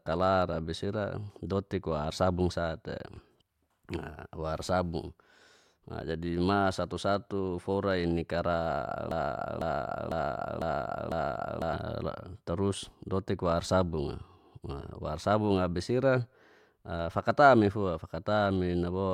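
Speech with a broken-record loop from 9.11 to 11.73 s, just after "fora i ni kara". A 0.5 s fragment repeats five times, replacing the audio. Likely a stalled player or stream.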